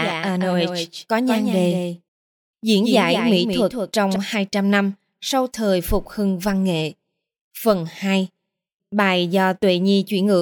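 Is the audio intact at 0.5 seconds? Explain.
No. A doubled audio track runs from the very start of the clip to 4.16 s, so it is already under way at 0.5 s. A second, full-band copy of the speech trails the original by about a fifth of a second, a few decibels quieter, with no decay or room colouring. This is likely a second capture through a slower path, or two misaligned copies left in an edit. It sounds like a hard, flat slapback echo that stops abruptly at 4.16 s.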